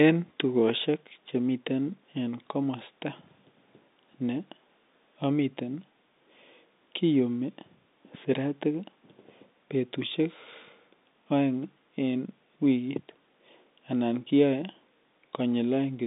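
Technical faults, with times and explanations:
No faults turn up here; the speech sits in the usual telephone band, roughly 200 Hz to 3.7 kHz, which is just what G.711 telephone coding gives when it's doing its job.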